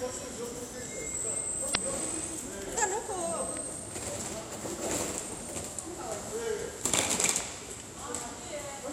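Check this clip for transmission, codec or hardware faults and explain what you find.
Three faults turn up: one burst of damaged data in the compressed stream and two loud pops.

Damaged data in a compressed stream, 1.71 to 1.76 s. Part of the encoded stream around this point was lost or overwritten, so the decoder could not parse the frames there, lost sync and had to hunt for the next valid frame header before decoding resumed. That shows up as a brief disruption of about 40 ms before the sound picks up again.

Loud pop, 3.57 to 3.59 s and 7.41 to 7.43 s. Each is a single sharp pop lasting about 20 ms, sitting on top of the audio, which continues underneath without interruption. The first peaks around 10 dB above the surrounding sound and the second is stronger, around 15 dB above. The likely cause is a sudden voltage step or spike entering the signal path, such as a plug, a switch or a static discharge, which the downstream circuitry turns into a brief, hard transient.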